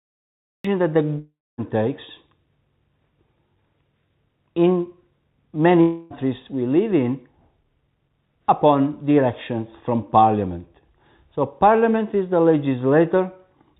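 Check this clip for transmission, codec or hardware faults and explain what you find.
Two kinds of fault are audible: a cut-off start and two long network dropouts.

The cut-off start comes from capture or streaming beginning late. The clip opens with digital silence until 0.65 s, then the audio enters abruptly mid-sound, with no attack or fade-in.

Each long network dropout is likely a stretch of lost packets that the receiver concealed. From 1.19 to 1.61 s, about 0.39 s of audio is missing. The last sound is stretched into a fading buzz that gives way to about 0.25 s of silence before the sound resumes further on. From 5.81 to 6.13 s, about 0.3 s is lost, and the synthetic fill bridges the whole gap without falling silent. The G.711 mu-law call path accounts for the narrow band with nothing above 4 kHz.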